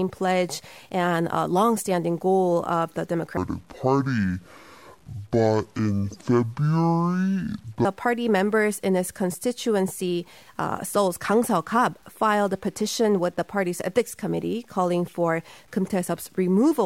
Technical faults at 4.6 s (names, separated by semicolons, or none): low bit depth without dither; section at the wrong speed